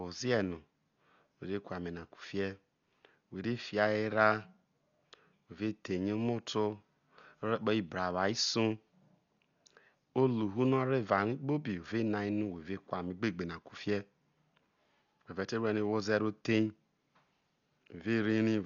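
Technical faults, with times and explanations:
Throughout: Dolby Digital compression, likely from an encode at a very low bitrate, something like 48 kbps. The encoder cut the band so nothing survives above 6.9 kHz and starved many frequency lines of bits, leaving the speech dull and heavily damaged, with rough, fluttering dither noise.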